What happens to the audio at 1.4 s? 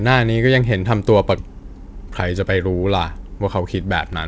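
At 1.38 to 1.40 s the audio does a skip ahead. About 0.7 s of sound is simply gone. It was dropped in transit or discarded when the jitter buffer overflowed, while later audio was already queued. Nothing fills the hole. The material on either side is butted together almost directly. You hear an abrupt jump forward, with the sound resuming mid-stream as if a chunk had been cut out.

Right after, from 1.48 s to 4.15 s, a jitter buffer speed-up follows. The buffer was holding more audio than its target, so the receiver trims it back. It repeatedly removes tiny slices of one or a few pitch periods, about 150 ms in total. Playback runs at 105% speed with unchanged pitch. The sound comes across slightly rushed.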